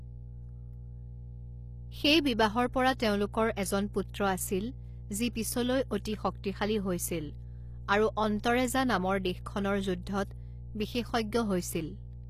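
It's a speech clip with a steady 60 Hz mains hum running the whole way through, sitting roughly 15 dB below the speech, most likely from a ground loop or a nearby transformer. The codec damage is plainly audible too, with nothing above 15 kHz and a treble that sounds rebuilt rather than real, likely from HE-AAC compression at a low bitrate around 24 kbps.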